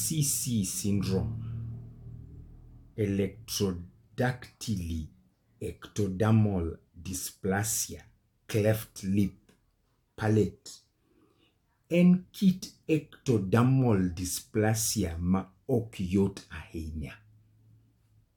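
No technical faults detected.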